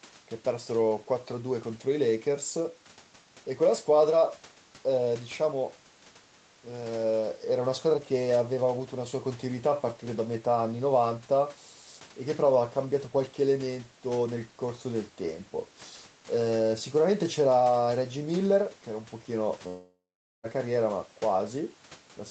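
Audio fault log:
19.67–20.46 s, long network dropout: the speech breaks off, the last sound carries on as a fading buzzy smear for about a third of a second, then about 0.44 s of near-silence follows before speech resumes with roughly 0.76 s missing. The likely cause is lost packets, with the receiver stretching the final sound until it gives up. A spectrogram shows smeared horizontal bands fading into an empty gap under the 8 kHz ceiling; the waveform shows a decaying envelope, then a flat line.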